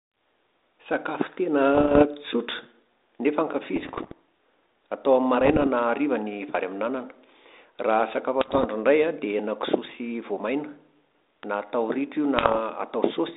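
Bit errors on an ADPCM link corrupt the speech in five bursts: 1.75–2.04 s, 3.76–4.12 s, 5.41–5.67 s, 8.41–8.67 s (just before "indray an"), and 12.37–12.59 s, the last slightly denser. Each flipped bit derails the decoder's adaptive step size and predictor, so the error rings on briefly, heard as pops, rough crackle and momentary level jumps. The band-limited telephone sound points to 32 kbit/s G.726.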